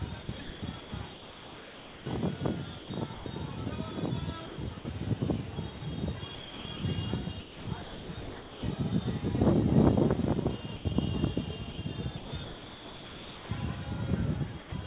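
From 0.23 to 3.26 s, 4.46 to 4.85 s and 5.78 to 8.63 s, the sender's voice detector likely switched on and off repeatedly. The sound is chopped by the voice detector, with about 1.6 s, 0.18 s and 1.4 s replaced by comfort noise. From 10.76 to 10.85 s the detector likely mistook the sound for background and stopped sending. This sound dropped by the voice detector gives way to 90 ms of steady comfort noise. From 11.72 to 13.49 s the switching is likely back, chopping the sound again with about 1.3 s swapped for comfort noise. From 14.60 to 14.72 s another drop, likely the detector again, puts 120 ms of comfort noise in place of the sound. All of this comes through a narrowband call path with nothing above 4 kHz.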